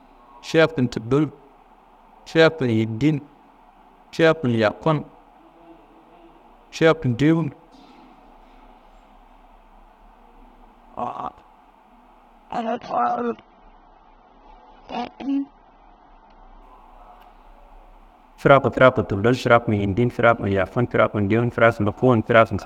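Adaptive stream at a lower bitrate, 12.62 to 16.62 s: a sudden switch down leaves the speech dull, nothing above 6.3 kHz, with no gap.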